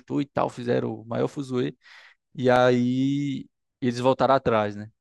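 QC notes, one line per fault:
2.56 s, block of digital silence: the speech drops to silence for about 5.3 ms and then snaps straight back, with no fade on either side. Because the waveform jumps to zero and back abruptly, you hear it as a quick tick rather than a gap. The hole is too short to register as a dropout. The length fits a single 256-sample buffer that didn't get filled in time.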